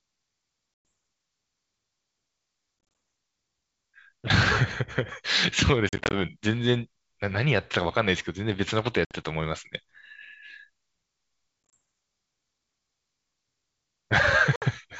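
Packet loss on an ADPCM call breaks the speech six times: at 0.74 to 0.85 s, 2.79 to 2.95 s, 5.89 to 6.15 s, 9.05 to 9.15 s, 11.69 to 11.74 s and 14.56 to 14.63 s. Each gap is hard-edged silence. The second, third and fifth are scattered dropouts, with runs no longer than 40 ms. The receiver's predictor and step size lose track of the sender's. Speech returns with brief, slight distortion, at times with a click or wrong in level.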